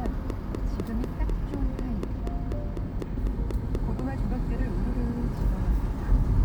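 From 0.06 to 4.0 s, a train of clicks ticks regularly about four times a second, some fifteen pulses standing well above the sound, likely from electrical interference.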